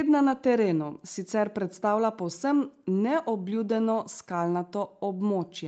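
No technical faults can be heard in this speech clip, which comes through a call path whose band stops at about 8 kHz.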